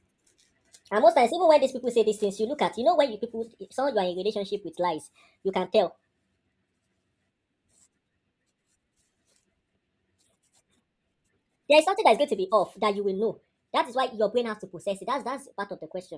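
From start to finish the speech runs fast and high, the mark of a wrong sample rate. The samples are clocked out faster than they were captured, with no rate conversion, so timing and pitch shift together. Everything plays at 1.38 times normal speed and sits about 5.5 semitones sharp, which fits audio recorded at 16 kHz being played back at 22 kHz. The result is hurried and chipmunk-like, with every syllable compressed.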